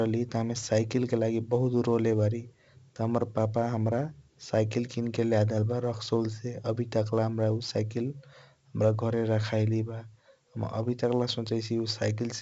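4-bit ADPCM compression throughout: heavy gritty hiss rides on loud speech and drops away in pauses, unlike steady noise; nothing above 7.7 kHz, fitting 16 kHz sampling.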